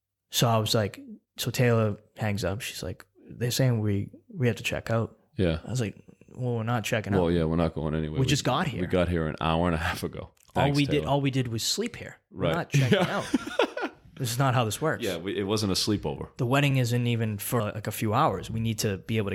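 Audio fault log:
16.71 s, underrun with held sample: just before "isn't even for like" the output briefly runs dry and the converter holds its last value for about 0.73 ms, which fits a 32-sample gap. Playback picks up right where it stopped, so the restart is barely a tick.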